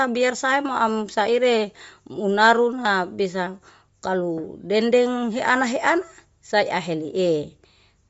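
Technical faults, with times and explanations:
Throughout, Bluetooth LC3 compression: speech stops dead above 7.7 kHz and has a grainy, breathy edge, likely LC3 noise-filling its stripped highs, fitting about 32 kbps.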